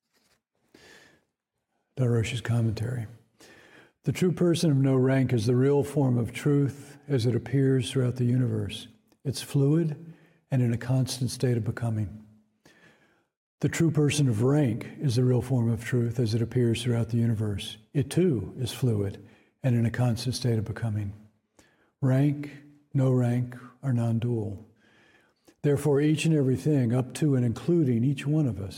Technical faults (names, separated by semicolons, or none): none